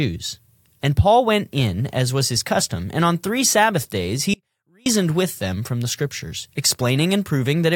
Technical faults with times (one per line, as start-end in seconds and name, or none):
4.34-4.86 audio dropout to a faint residue